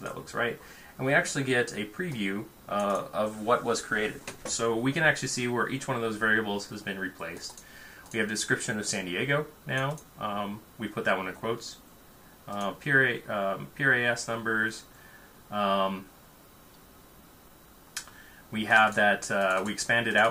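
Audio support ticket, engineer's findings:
Clock drift between sender and receiver: sender clock running about 3% slow against receiver. Jitter buffer keeps draining, so playout can't hold steady; sound runs slightly slow across the whole clip, with brief uneven timing hiccups where the buffer nearly empties.

Repeated timing corrections, 0.24 s to 19.98 s: receiver repeating short pieces to stay in step with the slow sender, at an effective 97% speed. Edits all lengthen, unevenly spaced, adding roughly half a second overall.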